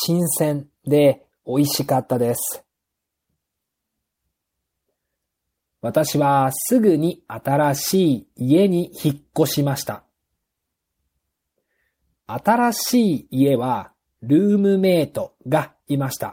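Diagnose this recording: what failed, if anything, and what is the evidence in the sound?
Clock drift between sender and receiver, at the network jitter buffer: the sending clock runs about 2% slow throughout this speech, so the buffer keeps draining. On a waveform, syllable spacing stretches slightly and inconsistently.

Repeated timing corrections from 0.24 s to 15.94 s: the receiver keeps repeating short pieces to stay in step, playing at roughly 98% speed and adding about 0.3 s overall. A spectrogram shows duplicated frames at uneven intervals, all lengthening.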